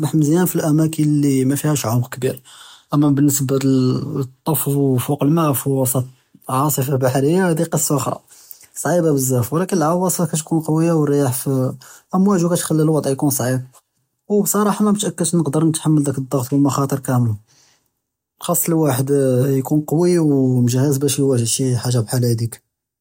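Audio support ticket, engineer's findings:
No audible faults found on listening; nothing to action.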